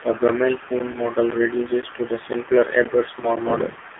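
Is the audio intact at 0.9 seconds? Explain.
No. Just before 0.9 seconds, at 0.79 s, a hard-edged hole of about 13 ms interrupts the sound: a gap between chunks, with silence inserted at a join that fits half-second chunks.

From 0.92 to 0.99 s the sound briefly dips and warbles. That is one lost AMR speech frame of 20 ms, concealed by the decoder reusing the previous frame's settings at falling gain.

Throughout, the AMR narrowband mobile codec at 7.4 kbps confines the sound to about 250 Hz to 3.5 kHz and leaves it plainly buzzy and synthetic.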